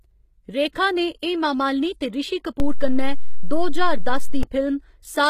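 HE-AAC compression runs through the whole of this speech clip: codec damage is plainly audible, nothing survives above 14.9 kHz, and the treble sounds rebuilt by copying lower bands upward rather than carried intact, likely from HE-AAC v2 at a bitrate around 20 kbps. A DC step shifts the waveform's zero line from 2.6 s to 4.43 s, giving a low thump or click while the speech continues unchanged over the offset.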